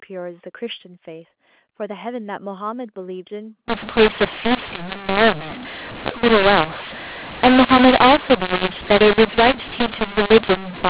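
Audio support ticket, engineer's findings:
Harsh, distorted speech with noise filling the pauses, from 3.68 s to end of clip. Probable component: G.711 decoder. Mechanism: mu-law and A-law mixed up. Mu-law-coded samples expanded with the A-law curve, scrambling levels and lifting near-silent samples well above zero. Before 3.68 s, G.711 telephone coding sounds as expected: 8 kHz sampling, nothing above 4 kHz, faint level-tracking quantisation noise.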